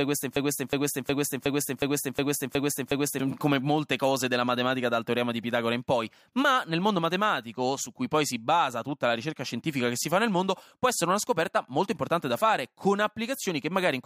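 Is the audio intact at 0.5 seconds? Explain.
No. A broken-record loop runs from 0.00 to 3.19 s, already under way at the start. A 364 ms speech fragment repeats exactly, back to back, eight times. A stalled player or stream is likely re-sending it. The original audio is lost until "come molte cose della".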